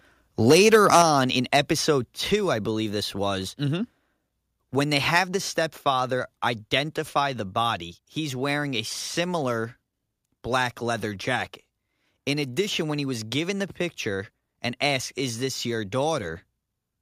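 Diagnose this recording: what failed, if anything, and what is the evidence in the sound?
The speech peaks from 0.5 to 1.02 s and again at 1.54 to 1.59 s have flattened tops and a harsh, crackling edge. This is likely microphone overload at the converter, with the input driven about 9 dB and then about 4 dB past full scale, squaring off a few percent of samples.

At 1.02 s, right after the first distorted burst, the voice and the background drop together by about 5 dB in a single step. This is likely the call processing stepping the microphone volume down after detecting the overload.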